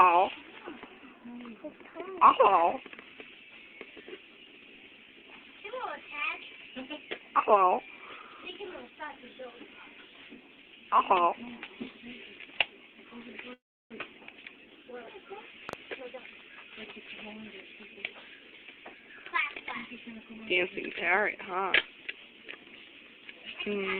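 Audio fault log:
13.53–13.93 s, call audio freeze: the sound stalls for about 0.39 s, with the last fragment continued briefly as a fading buzz before roughly 0.33 s of silence, then resumes exactly where it stopped, so nothing is lost but everything after is pushed about 0.37 s later. This is likely packets held up in transit leaving the jitter buffer empty. On a spectrogram the energy smears into a decaying band, then a blank column before normal content returns.
15.69–15.75 s, loud pop: two sharp pops in quick succession, peaking about 10 dB above the surrounding level, sit on top of the sound, which continues underneath without interruption. The likely cause is a sudden voltage step or pulse, from a plug, switch, static discharge or driver glitch, shaped by the circuitry after it. The waveform shows two narrow spikes towering over the signal; the spectrogram shows two thin vertical lines spanning the full frequency range.
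15.99–18.13 s, jitter buffer speed-up: over these two seconds the sound runs at 117% speed while its pitch stays unchanged, so it comes across as hurried. Roughly 0.4 s of audio is trimmed away as the receiver drains an overfull jitter buffer by cutting many short slices, each one or a few pitch periods long. On a spectrogram, harmonic lines keep their spacing but events arrive closer together; the waveform looks compressed in time, with tiny splice points.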